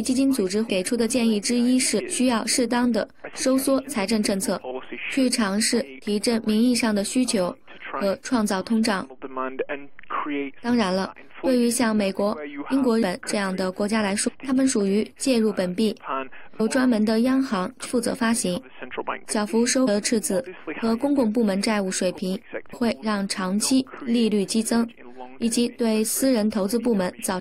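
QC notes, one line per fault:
0.69, 1.99–2.01, 13.02, 14.27–14.29, 16.6, 17.85–17.87, 19.87 and 22.72–22.74 s, compressed frames skipped: at each point the audio jumps forward, losing roughly 150 to 400 ms, as a run of whole frames goes unplayed. Each step is a multiple of a 23.2 ms frame, which fits 1024-sample frames. A spectrogram shows a sudden discontinuity. The waveform shows an abrupt envelope change.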